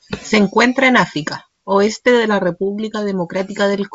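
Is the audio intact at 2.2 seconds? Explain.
Yes, the audio is intact at 2.2 seconds, with nothing breaking into the speech at that moment.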